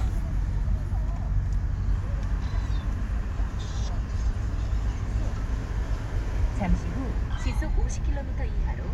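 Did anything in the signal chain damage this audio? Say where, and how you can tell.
No, nothing in the signal chain damaged this sound.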